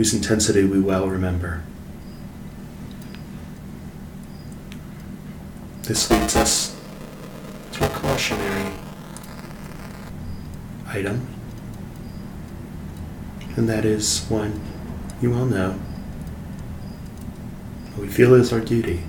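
From 5.96 to 10.09 s there's buffer tearing: writer and reader cross every period, splicing in stale audio, so you get a robotic 375 Hz buzz.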